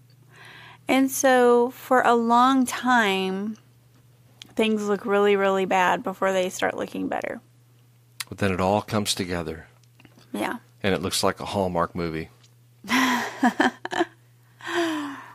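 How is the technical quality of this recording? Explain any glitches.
No glitches turn up anywhere in this speech recording on listening, so there is nothing to explain.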